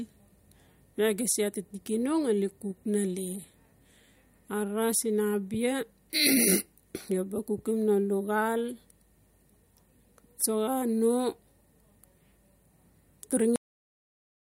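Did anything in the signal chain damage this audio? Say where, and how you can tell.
Yes. The speech stops dead at 13.56 s, mid-sound, and drops straight into digital silence through 14.44 s with no natural decay. This is a cut-off end at the storage or buffer stage: the final buffers were never written out, so the recording simply ends.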